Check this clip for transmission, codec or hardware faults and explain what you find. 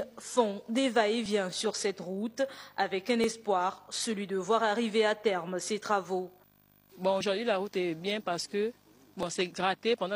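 There's one problem here, an overlap between stream segments, hitting four times: 1.26 to 1.29 s, 3.24 to 3.28 s, 7.21 to 7.23 s and 9.23 to 9.27 s. Two neighbouring segments' timestamps claim the same stretch, so the player trims the overlap even though that audio wasn't actually duplicated. Roughly 20 to 40 ms disappears each time and the waveform jumps, giving a small click or skip at the joins of what sound like 2-second segments.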